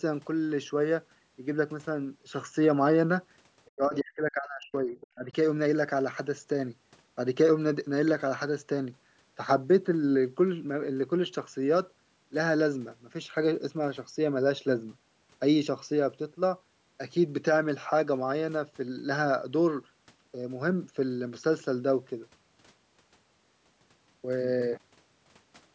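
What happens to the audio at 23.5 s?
At 23.5 s the speech carries on intact, with nothing breaking into it beyond the ordinary call microphone processing, whose high-pass filter thins out the lowest bass as expected.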